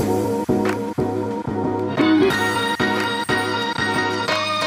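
No technical faults can be heard anywhere in the recording, and the signal holds steady throughout.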